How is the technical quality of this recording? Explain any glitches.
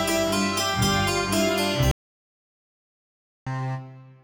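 The recording has one clear glitch: an audio dropout to silence from 1.91 s to 3.47 s, about 1.55 s in all. The sound stops abruptly mid-flow and resumes just as abruptly. The input was likely lost, perhaps through a disconnected device, failed link or stray mute, while the recorder kept writing silence. What separates this from a natural pause is that the gap holds silence with no room tone at all, and nothing fades or tails off at either edge.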